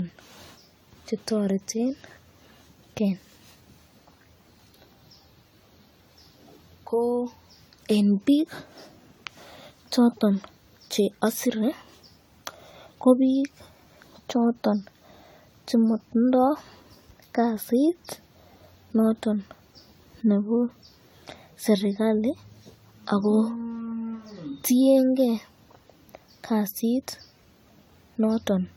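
Speech recording with generation loss throughout: the sound is swirly, smeared and hollow, with blurred consonant attacks and no content above 20 kHz. This most likely comes from around ten passes through AAC-LC, consistent with roughly 96 kbit/s, each adding fresh quantisation damage.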